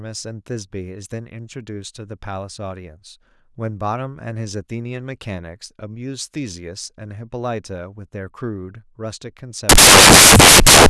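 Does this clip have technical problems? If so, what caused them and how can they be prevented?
Yes. From 9.69 s to the end, samples built from the wrong bytes turn the speech into loud, harsh broadband noise. Prevent it by matching byte order and sample alignment when reading the data.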